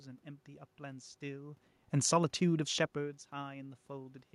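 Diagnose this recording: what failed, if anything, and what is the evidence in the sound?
Nothing stood out on listening: the steady room noise belongs to the recording, and the level shifts at around 1.5 s and 3 s sound like the talker moving relative to the microphone, not like anything in the system.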